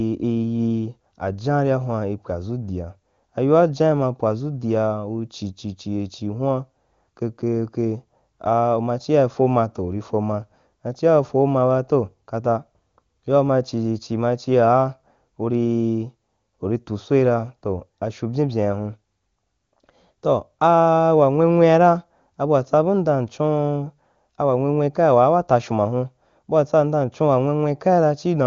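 Nothing's wrong with this speech recording: it comes over the AMR wideband (HD Voice) codec at its top rate of 23.85 kbit/s, where the coding holds up nicely, and the sound simply tops out around 7.3 kHz, as you'd expect from that codec's bandwidth.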